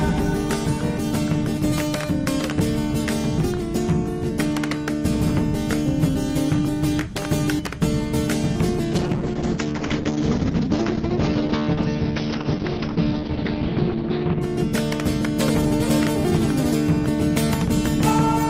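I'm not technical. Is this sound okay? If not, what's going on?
No. From about 8.93 to 14.47 seconds the audio turns muffled and rough, as if heard through a thin wall, then clears up again. This is a call bitrate drop: the call decided its connection had less room, so the encoder squeezed the sound into far less data. With so little to work with, it coded the sound more coarsely and cut away the crisp upper range above about 6 kHz, until the connection recovered.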